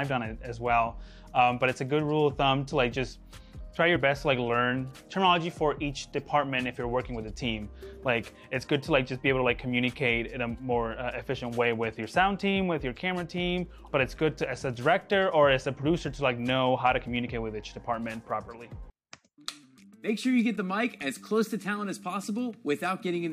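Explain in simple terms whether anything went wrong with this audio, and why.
Something went wrong once, between 3.95 and 3.97 seconds. This is called compressed frames skipped. A small chunk of the compressed file was missing or too damaged to play, so the sound jumps ahead by about a fiftieth of a second.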